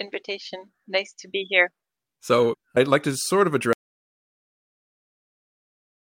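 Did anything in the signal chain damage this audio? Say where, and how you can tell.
Yes. There is an audio dropout to silence from 3.73 s, after "like to sort of", to the end. It is flat silence with no room tone, unlike gating, and likely a disconnected input.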